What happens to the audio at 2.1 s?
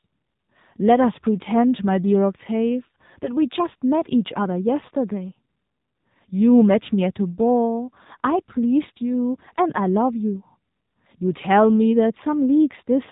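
At 2.1 s the speech carries AMR narrowband mobile codec damage, present across the whole clip. A vocal-tract model driven by sparse pulses makes it buzzy and synthetic, consistent with roughly 7.4 kbps. A spectrogram shows a hard ceiling near 3.8 kHz with nothing above.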